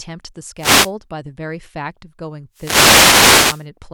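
A speech recording with two wireless microphone noise hits. The first runs from 0.57 to 0.92 s. The second is longer, from 2.52 to 3.69 s. Each is heard as a swish of static rising over the voice. The mic's FM radio link is fading. Reflected copies of the signal arrive out of step and cancel the direct one. As the signal weakens, receiver noise comes up and masks the speech until reception recovers.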